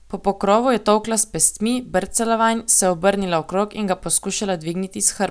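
Nothing in this bit of speech points to a technical fault; there's simply nothing here to flag.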